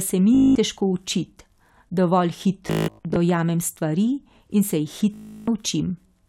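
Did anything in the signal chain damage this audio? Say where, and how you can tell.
Yes. Bluetooth stutter on the wireless link at 0.35–0.55 s, 2.68–3.16 s and 5.14–5.48 s: lost packets make the receiver loop its last short slice, a buzzing repeat, before speech jumps ahead. Waveforms show identical repeated cycles; spectrograms show fine vertical striping.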